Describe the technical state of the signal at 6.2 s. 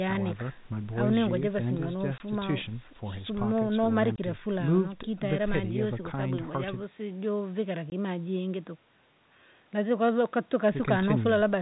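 At 6.2 s the audio is intact, with no fault present; the telephone-band coding it passes through is working as designed there.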